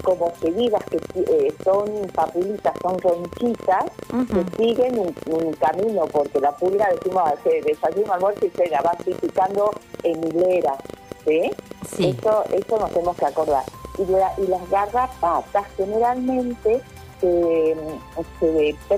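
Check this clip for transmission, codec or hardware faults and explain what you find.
A train of clicks runs from the very start, 0.00 s, to 13.96 s. Something in the chain, likely interference from nearby equipment or a faulty connection or power supply, injects short pulses at about 15.8 per second on an uneven pace, roughly two hundred in all. Each pulse has much the same shape and peaks around 5 dB above the sound itself, so it is heard as irregular ticking and popping laid over the audio and through its pauses.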